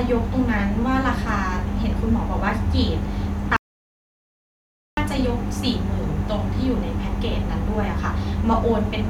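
At 3.57 s the speech cuts out abruptly into an audio dropout to silence lasting 1.41 s, returning mid-flow at 4.97 s. The gap is silent with no room tone, unlike a natural pause, which points to a likely momentary loss of the input signal.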